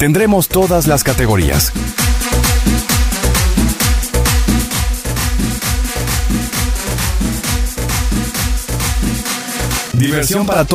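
Channel delay (doubling) from 4.64 s to 10.58 s: one channel arrives 40 ms late, so the mono sum carries an equal-level slap echo behind the audio.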